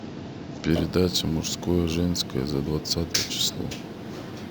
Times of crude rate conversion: 0.70-4.50

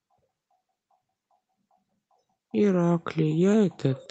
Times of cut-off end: none

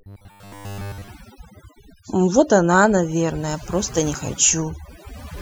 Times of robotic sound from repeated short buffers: 0.01-1.08

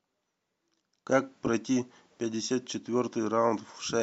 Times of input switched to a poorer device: none

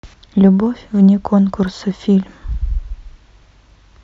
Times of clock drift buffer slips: 0.66-3.70

